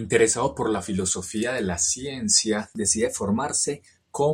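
From 2.77 to 3.87 s the speech suddenly runs about 5.5% fast and sits roughly 93 cents sharp, close to a semitone, then snaps back to normal. This is a drift correction step, likely from clock-matching software jumping its playback rate to rebalance a buffer.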